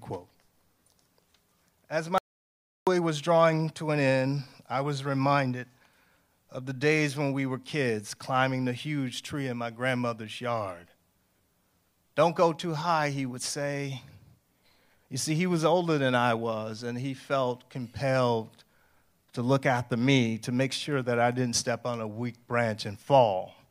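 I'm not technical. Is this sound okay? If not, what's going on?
No. From 2.18 to 2.87 s the speech has an audio dropout to silence: about 0.69 s vanishes into dead, total silence before "was drawing to an". A natural pause would still carry faint room sound. Here the input was likely lost briefly, so those words are gone.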